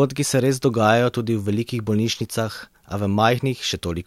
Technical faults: none

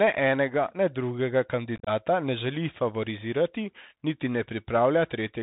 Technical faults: Bluetooth CVSD headset codec; unconcealed Bluetooth headset packet loss

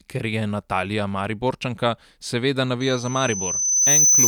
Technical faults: loudspeaker feedback squeal

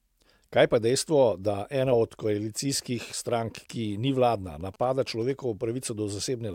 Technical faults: GSM signalling bursts

